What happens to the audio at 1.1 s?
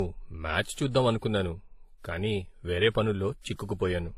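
At 1.1 s the speech carries the same fault it has from start to finish: it has most likely been through transcoding between lossy codecs. The sound points to a low-rate HE-AAC encode, around 20 kbit/s, later re-encoded as WMA at about 64 kbit/s. The second encoder spends its bits reproducing the first one's damage and adds its own, so two kinds of artefact overlap. Nothing survives above 14.8 kHz.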